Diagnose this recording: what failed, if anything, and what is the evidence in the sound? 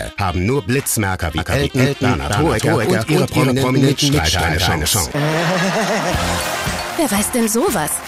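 A second, slower capture path or an out-of-step edit likely mixed the audio in twice, a doubled audio track. From 1.38 s to 5.12 s, a full-band copy trails about 300 ms behind at roughly equal level, dry with no decay, starting and stopping abruptly.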